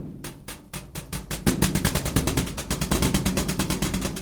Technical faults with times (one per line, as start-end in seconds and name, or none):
1.21-2.31 call bitrate drop
2.91-4.21 doubled audio track